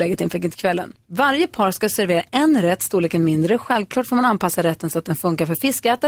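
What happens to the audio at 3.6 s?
Nothing goes wrong at 3.6 s; the speech continues intact through that moment, with no dropout, click or other break.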